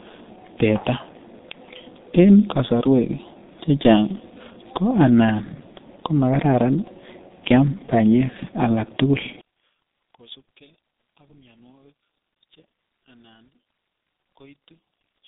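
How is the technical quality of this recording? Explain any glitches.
Technical quality is poor. The speech is coded through a low-rate telephony codec for the whole clip, and from 9.41 s to the end the level collapses.

G.723.1 codec, throughout. The speech sounds muffled and hoarse. Consonants smear together. The codec cuts the signal into 30 ms frames and rebuilds each from a coarse voice model that updates slowly. The damage here is heavy, which fits a 6.3 kbit/s setting. The band runs from about 150 Hz to 3.7 kHz, with nothing above 3.7 kHz. That removes the crisp edges of sibilants and leaves the voice thin and boxy.

One channel inverted, from 9.41 s to the end. At 9.41 s the speech drops by about 28 dB and becomes a faint remnant. The likely cause is one stereo channel with reversed polarity, summed to mono. Everything common to both channels cancels. The centred voice and low end almost disappear. 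Only the small difference between the two channels survives. That explains the faint residue.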